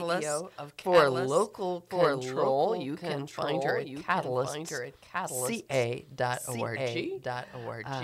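From the start to the end of the clip there's a doubled audio track: a second full-band copy of everything trails the original by about a second, sitting roughly 5 dB lower. It sounds like a clean, dry echo with no room tail or smearing, just the same sound again, slightly quieter. That points to the audio likely being picked up twice, say through a slower path, or two misaligned copies left in an edit.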